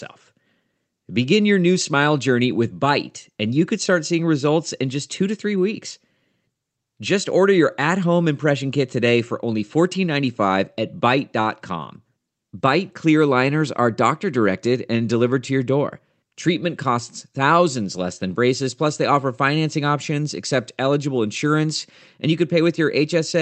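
Nothing in this speech recording stood out as a problem on listening.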